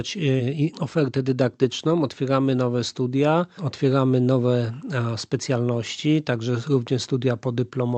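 The audio shows no technical faults, and the WebRTC call path it passed through with Opus coding behaves as expected, with the high end rolling off at about 8 kHz.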